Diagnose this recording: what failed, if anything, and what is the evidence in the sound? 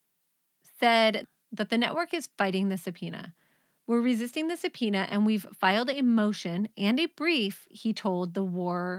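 Nothing failed in this recording.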